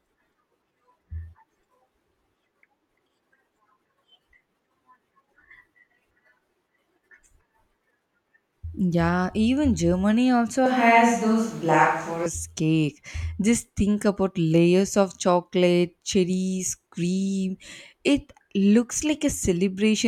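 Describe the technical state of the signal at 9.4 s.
At 9.4 s the signal is intact, with no dropout, distortion, glitch or other fault audible at that point in the speech.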